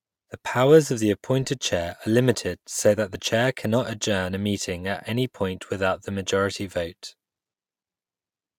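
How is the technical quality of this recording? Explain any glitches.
There's one glitch, at about 3.15 s, between "are limited so that" and "chair cannot adjourn a": compressed frames skipped. Several frames went missing, so the speech jumps ahead roughly 20 ms.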